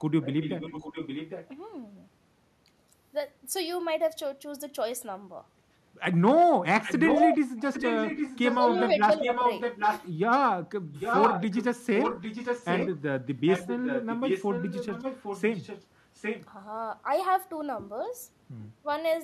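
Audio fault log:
0.22–1.47, 6.83–7.37, 7.57–8.89, 9.21–10.08, 10.92–11.67, 11.95–12.98, 13.46–15.85, 16.15–16.46 s: echo leak. A copy of the speech trails 806 ms behind, sometimes well below and sometimes as loud as the original. This is likely a far-end loudspeaker's sound that the echo canceller let through.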